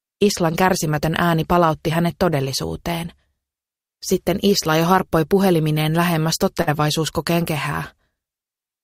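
A burst of packet loss hits at 6.61 to 6.70 s. Several consecutive packets never arrived in time. The receiver stretched the last sound for about 54 ms, fading it down. Playback then resumes later, with about 60 ms of audio missing.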